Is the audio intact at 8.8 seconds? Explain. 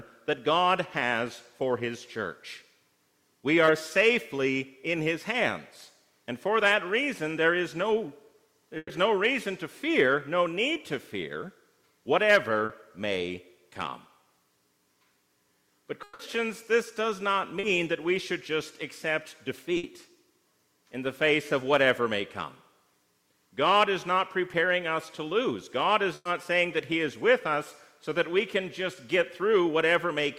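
No. From 8.77 to 8.91 s the sound freezes into a held, fading continuation of whatever came just before, dies into about 30 ms of silence, then picks up again with a piece skipped. That is a burst of packet loss: several packets in a row never arrived in time, so the receiver stretched the last audio across 120 ms while turning it down, and the 120 ms of real material in that stretch is gone.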